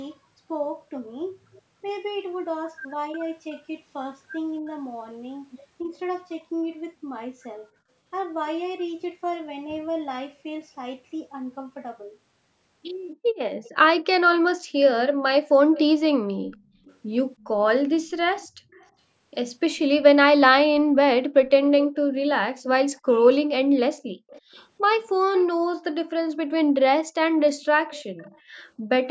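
At 13.63 s a faint delayed copy of the voice appears, lasting until 14.05 s. This is an echo leak. It is likely caused by a far-end loudspeaker whose echo canceller let some of the sound back into the microphone. It returns from 15.72 to 16.94 s, from 17.95 to 18.88 s, from 24.28 to 25.45 s, and from 27.89 to 28.39 s. The delay grows from 322 to 357 ms. The level varies from about 35 dB under the voice at its faintest to about 15 dB under the voice at its loudest.

Inside the second echo, from 16.32 to 16.55 s, the room sound dips by about 9 dB for roughly a fifth of a second. This is background gated by the echo canceller. It pulled the microphone down while the loudspeaker played. Deeper gating follows at 24.16 to 24.27 s and at 27.2 to 27.39 s. Each time the room sound drops by about 40 dB, so it briefly vanishes, then returns.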